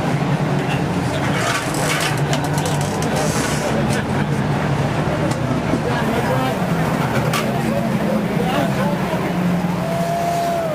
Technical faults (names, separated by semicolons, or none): sample clock jitter